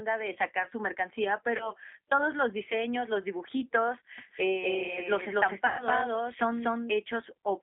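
Speech carried over a G.729 line at 8 kbit/s sounds slightly rough and synthetic throughout, with nothing above about 3.6 kHz; unlike plain narrowband filtering, it adds codec grain. VoIP packet loss concealed by the speech codec occurs at 1.57–1.74 s, between "de sacar su mercancía" and "todos los diseños los": a 30 ms gap, which fits one lost packet, is filled with a fading extrapolation rather than silence. It happens again at 5.67–5.89 s, where a 120 ms gap, which fits about four packets, is filled the same way, and the weak sound lingers after the gap. From 4.18 to 6.92 s, after "los diseños los dibujitos", a doubled audio track starts and stops abruptly, with a copy about as loud as the original trailing by roughly a fifth of a second. It lacks an echo's decay or room colour, which points to the same audio likely being captured twice by a slower second path.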